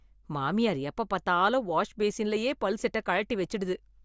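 No technical faults can be heard anywhere in this speech recording.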